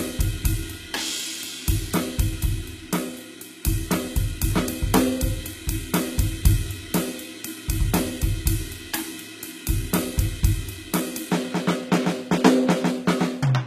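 From start to finish the music carries plainly audible codec damage, likely from HE-AAC compression at a low rate, consistent with roughly 20 kbps. Nothing is present above 14.9 kHz, and the treble below that edge sounds synthesized: it is rebuilt by spectral band replication from transposed lower bands under a coarse envelope. The top end keeps its brightness, but the patched harmonics do not line up with the coded band beneath them.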